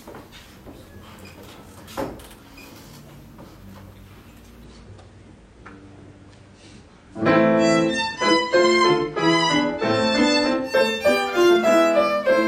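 From 4.64 to 10.64 s the audio drops to a lower-bitrate version of an adaptive stream. Everything above about 9.8 kHz vanishes and codec artefacts thicken, which fits a switch from roughly 96 to 32 kbit/s AAC. The change happens abruptly, with no gap, when the connection slows.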